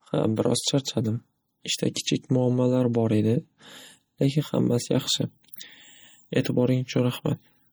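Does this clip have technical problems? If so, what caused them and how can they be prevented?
Yes. Throughout the speech there's a watery, swirly texture, with weak detail flickering in and out between frames, which is likely MP3 compression at a starved bitrate, something around 48 kbps. To prevent it, encode at a much higher bitrate or keep a lossless master.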